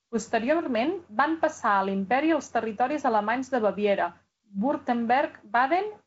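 Nothing stood out on listening to this speech, which arrives through G.722 wideband telephone coding with its content reaching up to 7.6 kHz.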